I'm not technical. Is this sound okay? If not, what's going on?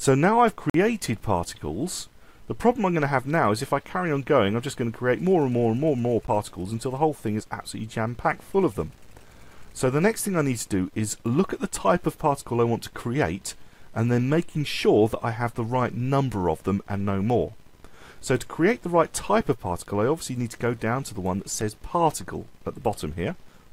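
No, not quite. There are four spots where the sound briefly drops out, each a block of digital silence. The audio cuts to dead quiet and snaps straight back. The longest is at 0.70 to 0.74 s, a short hole of about 46 ms. The others are quick ticks at 6.27 s, 18.39 s and 21.61 s. Two of the gaps are 2048 and 512 samples long, so the program most likely didn't fill its output buffer in time.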